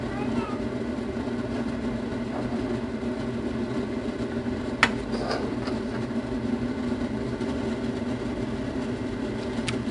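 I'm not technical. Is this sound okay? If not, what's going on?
No, there's a gritty hiss riding on every loud moment from start to finish, and sharp hits sound crunchy. That's 4-bit ADPCM compression, which stores each tiny step roughly. Nothing above about 10.6 kHz survives either, so everything sounds dull.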